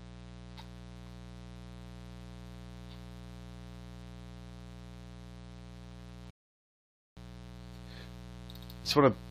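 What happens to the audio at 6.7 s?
At 6.7 s the sound has dropped out completely. The silence runs from 6.31 s to 7.17 s, and then the audio picks up exactly where it stopped, with nothing skipped. This is a rebuffering stall: the player used up the audio it had downloaded and paused until more data arrived. No material is lost, but the gap adds about 0.86 s to the clip's running time.

Underneath the sound on either side of that gap is a steady, raspy buzz, roughly 15 dB below the main signal. It is mains buzz at 60 Hz. Something like a dimmer, a rectifier or poor shielding is letting sharp switching spikes into the signal twice per mains cycle, and those spikes produce a dense set of 60 Hz harmonics that reach up into the kilohertz range and give the buzz its harsh edge.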